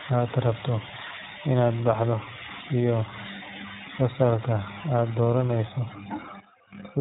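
From start to end, the speech carries iLBC codec damage. The band stops at 3.8 kHz, so it sounds thin and boxed. Each short frame is coded on its own, which fits 20 ms frames at 15.2 kbps. The result is a plainly rough, synthetic edge.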